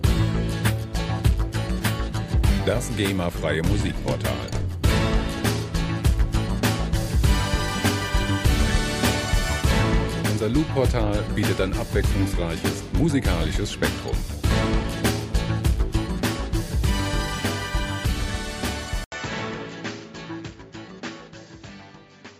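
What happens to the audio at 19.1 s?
The input likely switched to a poorer device at 19.04 s, with an 80 ms silence at the switch. From there to the end the band stops at 7.6 kHz, so the sound turns duller, drops about 5 dB, and picks up a faint new background noise.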